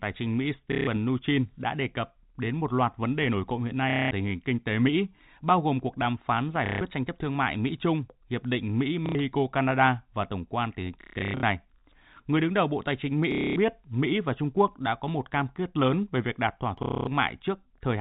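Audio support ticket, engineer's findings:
Packet loss with last packet repeated, at 0.72–0.87, 3.90–4.11, 6.66–6.81, 9.06–9.15, 11.01–11.43, 13.32–13.56 and 16.83–17.07 s. Short robotic stutters in the speech. Receiver jitter buffer replaying the last packet across gaps of 90–240 ms; the repeat ignores pitch, and the buzz fits 30 ms packets (about 33 Hz). 11.01–11.43 s is scattered loss, longest run 150 ms. G.711 telephone band is audible throughout.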